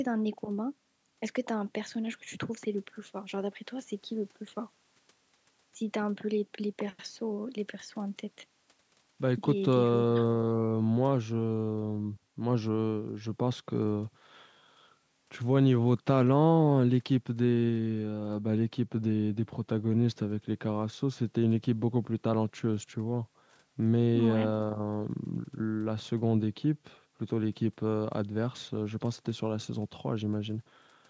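Speech through a call's microphone processing, bass trimmed by its high-pass filter and nothing above 8 kHz, both normal for that path, with no technical faults heard.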